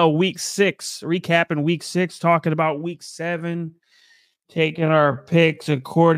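From 3.18 s, right after "six talking about week", the speech abruptly drops to about 0.63 times its normal pace and stays that slow until the end. The pitch doesn't budge, though, which points to a time-stretched section, likely from software pulling the audio out to fill a longer slot by repeating short chunks. That's why this last stretch drags.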